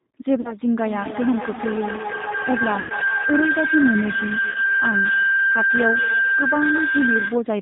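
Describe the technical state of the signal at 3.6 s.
A feedback howl runs from 0.76 s to 7.56 s. A microphone-to-loudspeaker loop gains level each pass, building a tone near 1.5 kHz. The loop repeats roughly every fifth of a second, and the howl peaks about 1 dB above the speech.

G.729 codec damage is plainly audible throughout. The speech is rebuilt from a filter and sparse pulses, which fits an 8 kbit/s stream. It sounds rough and synthetic, with nothing above 4 kHz.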